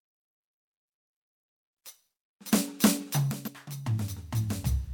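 At 3.31 s the music and its background noise drop together by about 12 dB in a single step, with no fade, and stay at that lower level to the end of the clip. This is a sudden gain jump. The likely cause is a digital gain setting or bit shift applied between one sample and the next without a ramp, so the whole signal lands on the new level at once.

From 3.44 s to 3.48 s, just after the level drop, a brief glitch of about 44 ms cuts into the music and then gives way to normal playback. This is damaged data in a compressed stream. Bytes in that stretch of the encoded file were lost or corrupted, so the decoder misread those frames, lost sync and had to search for the next valid frame header before it could resume clean output.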